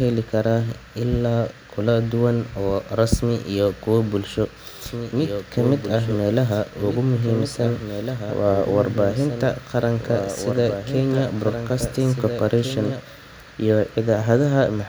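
A speech recording with a doubled audio track from 4.86 s to 13.0 s: a second, full-band copy of the speech runs about one and a half seconds behind, roughly 10 dB quieter, with no room colour, starting and stopping abruptly. This likely comes from a second, slower capture path mixed in.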